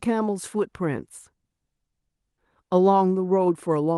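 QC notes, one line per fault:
No faults detected.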